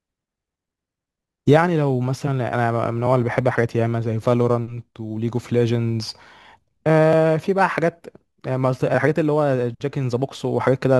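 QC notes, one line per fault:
Throughout, crude rate conversion. The speech has a fine, gritty fizz that tracks the louder and brighter sounds and carries tones that have no musical relation to the voice. The pattern points to a 48 kHz to 44.1 kHz change made by simply keeping the nearest sample, with no filtering. That skipping repeats in a fixed cycle set by the two rates. It adds distortion sitting roughly 35 dB below the speech.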